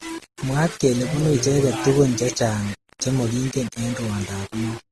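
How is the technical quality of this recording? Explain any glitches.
The technical quality is poor. Two faults run through the whole speech recording.

The first is low bit depth without dither, present from start to finish. Quiet passages turn gritty, and the softest moments sputter or fall silent. The grain rises and falls with the speech and sits only about 15 dB below it. That points to around 5-bit resolution. The likely cause is rounding to so few steps with no dither, so the error tracks the signal and is heard as distortion rather than as steady hiss.

The second is transcoding between lossy codecs, also present throughout. Nothing is heard above 12.1 kHz, so the top end sounds dull. Artefacts of different kinds overlap in the speech. The sound points to a chain of low-bitrate encoders, roughly Vorbis, then AAC, then Opus, at around 24 to 33 kbit/s. The likely cause is each later encoder spending its bits on the previous one's damage and adding its own. 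The lowest cut-off in the chain is the one that remains.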